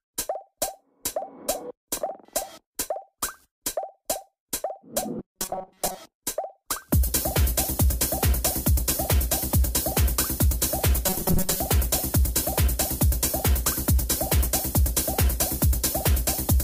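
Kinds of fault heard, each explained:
Robotic sound from repeated short buffers: twice, around 5.19 to 5.97 s and again from 11.07 to 11.60 s, the sound turns into a stiff, metallic buzz locked at 188 Hz. That's likely the playback side running short of fresh audio and looping a tiny slice to fill the gap. A 188 Hz buzz fits a chunk of about 5.3 ms being repeated. Most of the real material in those stretches is skipped, so only its rough outline comes through.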